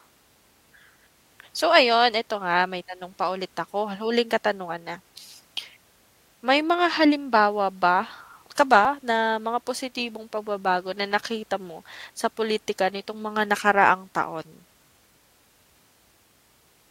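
A speech recording with one quick skip at 8.85 s: a sliver of roughly 20 ms drops out and the two sides butt together. It's likely audio missing between chunks, with the recorder working in 6-second blocks.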